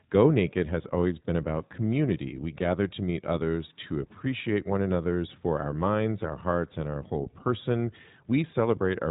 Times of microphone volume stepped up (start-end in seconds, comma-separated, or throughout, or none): none